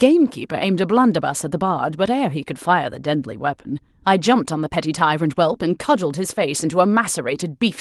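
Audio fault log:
No faults found; the speech comes over a WebRTC call path, with its top end stopping near 12 kHz, which fits Opus at around 24 kbps.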